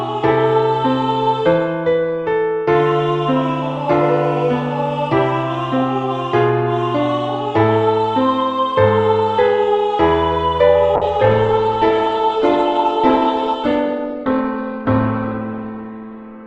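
A call bitrate drop begins at 10.96 s and lasts to the end of the clip. The call's bandwidth estimate fell, forcing the Opus encoder onto a much smaller bit budget, which fits a fall from about 48 kbps to about 10 kbps. The audible bandwidth narrows from 20 kHz to 8 kHz, so the top end disappears. The sound turns muffled and coarse, with a rough, watery texture for the last 5.3 s, and it never recovers before the clip ends.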